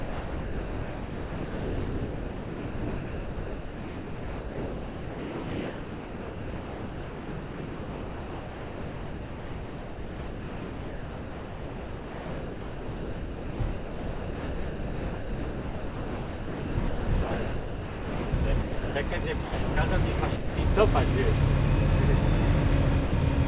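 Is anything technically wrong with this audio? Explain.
Yes. The recording of everyday sounds is heavily damaged by a sender's voice detector, heard through a call path that passes nothing above 4 kHz, which suggests a narrowband G.711-type codec.

Sound chopped by the voice detector, 0.00 to 18.95 s: the detector likely kept toggling transmission, so almost all of this stretch, around 18.3 s, was replaced by comfort noise. The sound comes through in choppy fragments.

Sound dropped by the voice detector, at 19.43 to 19.77 s, 20.36 to 20.58 s and 23.06 to 23.13 s: here the detector likely judged the sound to be background and stopped sending for 330 ms, 210 ms and 60 ms. Each gap becomes steady comfort noise until transmission resumes.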